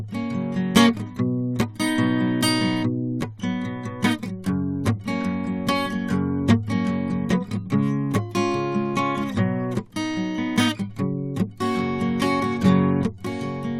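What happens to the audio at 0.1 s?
Nothing goes wrong at 0.1 s; the music plays through that moment intact, with no dropout, click or other fault.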